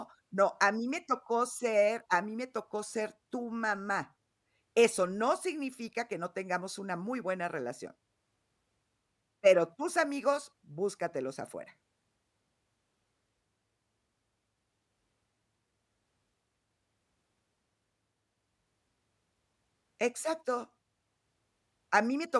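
No technical faults can be heard in this recording.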